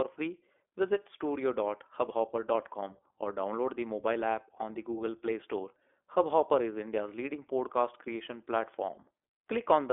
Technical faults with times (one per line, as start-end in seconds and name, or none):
0.00-9.93 iLBC codec